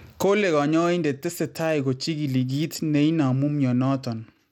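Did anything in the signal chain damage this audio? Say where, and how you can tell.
Yes, at the codec stage. The speech was likely sent through Bluetooth SBC compression starved of bits, which fits about 96 kbps, so the treble flickers and grit rides on it throughout.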